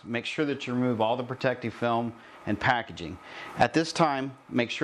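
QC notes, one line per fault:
No faults detected.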